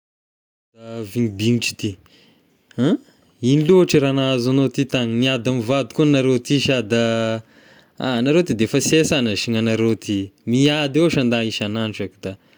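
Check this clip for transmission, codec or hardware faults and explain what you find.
No faults detected.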